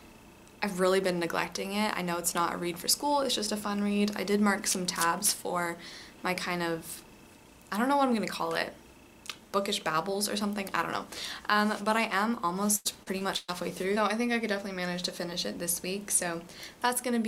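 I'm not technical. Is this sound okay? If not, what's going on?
No. From 12.75 to 13.50 seconds there is repeated packet loss, which gives a robotic sound. The audio drops out four times in under a second. Each gap is filled by stretching the last bit of sound, so it turns choppy and robotic.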